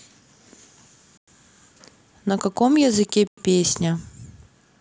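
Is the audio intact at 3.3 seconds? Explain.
No. A gap between chunks interrupts the speech from 3.28 to 3.38 s. The audio arrives in 2-second chunks, and 100 ms of silence sits at this join without removing any sound. The result is a brief, hard-edged hole.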